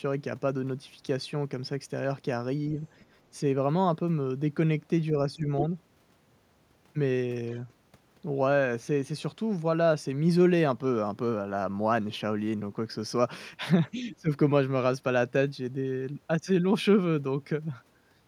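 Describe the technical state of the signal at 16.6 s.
At 16.6 s the speech signal is intact, with no audible fault at that moment.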